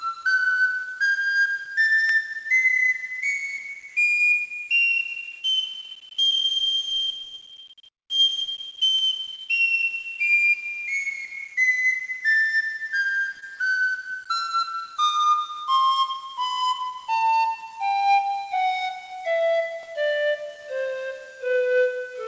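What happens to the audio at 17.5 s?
At 17.5 s, as throughout the clip, the audio was likely rounded to a low bit depth without dither, consistent with about 6 bits, leaving grainy, signal-following distortion roughly 30 dB below the sound.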